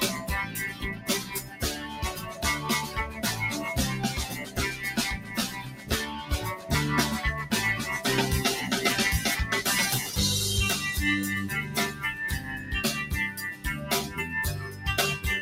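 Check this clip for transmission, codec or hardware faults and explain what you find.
A noise suppressor made for speech has been left running on material that isn't speech, and at several points it cuts specific sounds.

Noise suppressor applied to music or sounds: throughout the clip, the suppressor treats sustained tones, ambience and tails as noise. Gain swings by roughly 10 dB, so level pumps and thins. On a waveform, the envelope breathes unevenly. On a spectrogram, sustained bands flicker and fade between onsets.

Sound cut by the noise suppressor: there are dips at 0.46–1.62 s, 2.88–3.21 s, 4.33–4.58 s, 5.17–5.91 s, 11.64–12.03 s, 12.39–12.72 s and 14.68–14.86 s, each about 6 to 9 dB deep. The steady or decaying sound sinks or has its tail chopped, while transients survive. These dips show as notched troughs in the waveform and darkened patches on the spectrogram.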